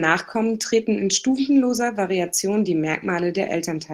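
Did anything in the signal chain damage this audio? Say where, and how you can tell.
No, no damage audible.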